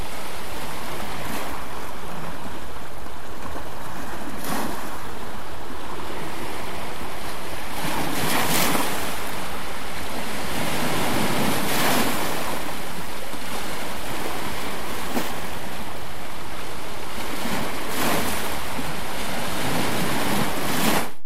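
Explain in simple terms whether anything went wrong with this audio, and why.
Something in the recording chain added a steady push to the signal, a fault called DC offset. The whole waveform sits shifted away from its centre line for the entire clip, from the first moment to the last. You can't hear that shift itself, but it eats into the room the audio has before it distorts, so loud moments hit the ceiling sooner, and it leaves a constant, silent band of energy at the very bottom of the spectrum.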